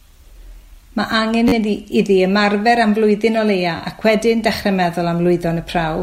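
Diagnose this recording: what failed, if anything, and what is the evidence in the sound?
The playback buffer stage failed, producing repeated buffers at 1.48–1.53 s and 3.78–3.80 s. Each is a rapid buzzy stutter of one roughly 10.7 ms slice, four repeats then two, which fits a 512-sample buffer being replayed while fresh speech arrived late.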